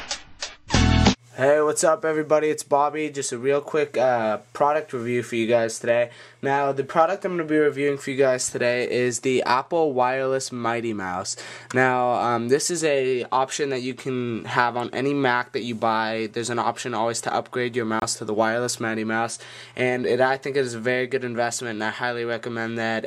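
A corrupt frame muted at 18.00 s cuts the audio into abrupt silence for about 36 ms, until 18.03 s. The damaged compressed data appears to have been rejected by the decoder, and the player filled the gap with silence. The gap's length points to a single lost codec frame. Unlike a buffer underrun or a splice, the timing doesn't shift: the audio resumes exactly where it would have been. And unlike concealment, nothing is smeared or repeated across the hole.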